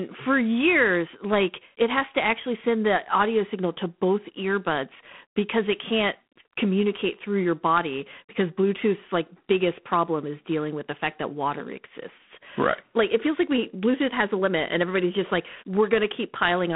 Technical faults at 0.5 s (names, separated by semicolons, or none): G.726 ADPCM